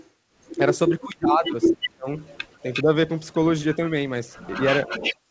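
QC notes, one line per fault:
0.00–0.07 s, 1.10–3.76 s, 4.33–5.16 s, echo leak: a delayed copy of the speech trails it, faint at first (about 25 dB down, 405 ms late), then roughly as loud as the speech and later about 5 dB below it, 355 ms late. This is likely a far-end loudspeaker whose echo canceller let its microphone pickup return.
0.89–2.08 s, 2.63–2.97 s, speech suppressed in double talk: the speech dips in pieces, for about a second in total with drops of about 25 dB in the first span and briefly by about 10 dB in the second. This likely happened because the echo canceller, faced with both sides at once, turned everything down.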